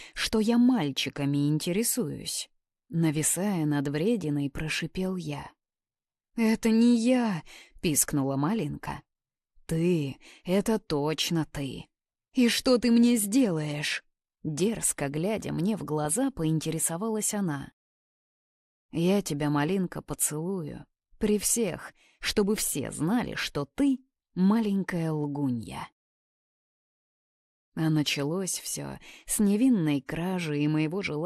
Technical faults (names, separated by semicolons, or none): MP2 compression; DAB burbling